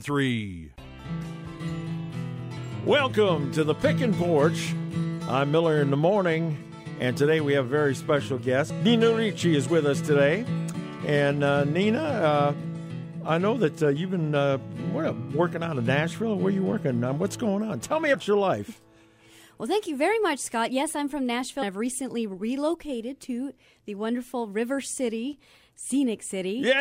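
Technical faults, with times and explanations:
2.56 s, 18.13 s and 21.61 s, compressed frames skipped: the decoder loses a run of several compressed frames, which fits a 24 ms frame length, so the audio jumps ahead by about 200 ms, then about 150 ms twice.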